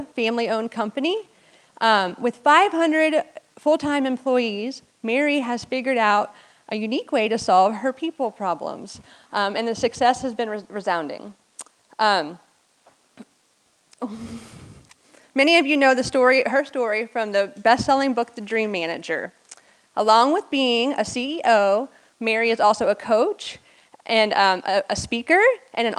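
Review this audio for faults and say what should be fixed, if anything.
Nothing stood out on listening, so there is nothing here that needs fixing.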